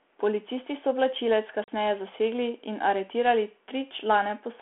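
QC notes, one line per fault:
1.64 to 1.71 s, packet loss on an ADPCM call: a hard-edged gap of about 40 ms, roughly two packets' worth, drops out of the speech. When the speech comes back the decoder's predictor and step size have lost track of the sender's, so it returns slightly distorted before it settles.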